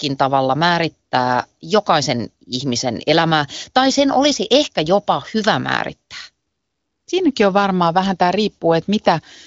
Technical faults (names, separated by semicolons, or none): none